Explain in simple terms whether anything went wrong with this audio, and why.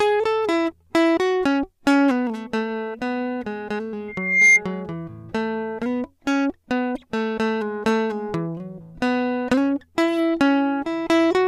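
Something did go wrong: at 4.08 s there's a loudspeaker feedback squeal. A microphone was picking up the speaker it was feeding, so one pitch, around 2.1 kHz, kept looping round and getting louder. You can hear it swell over a bit under half a second into a piercing whistle that sits clearly above the music, then it stops at 4.61 s, presumably when the loop got broken.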